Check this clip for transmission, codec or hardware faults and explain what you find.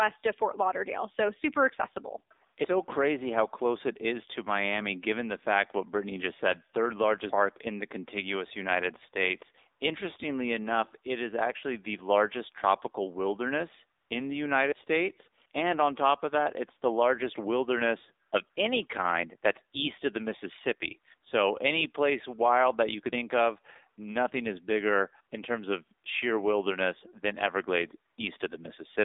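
Two faults are present: an AMR narrowband mobile codec throughout, and brief AMR comfort noise gaps. The band runs only from 300 Hz to 3.7 kHz. Speech sounds buzzy and synthetic, which fits a low mode near 7.4 kbps. A vocal-tract model is driven by sparse pulses, so detail is lost.

AMR comfort noise appears at 14.00 to 14.10 s (100 ms), 18.28 to 18.32 s (40 ms), 18.50 to 18.56 s (60 ms) and 28.12 to 28.18 s (60 ms). Speech frames stopped, so synthetic, smooth noise briefly replaces the real background.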